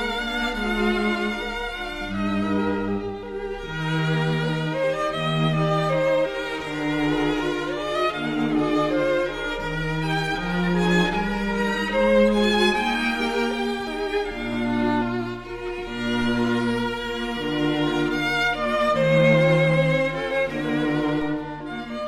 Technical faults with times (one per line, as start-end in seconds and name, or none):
21.21 DC step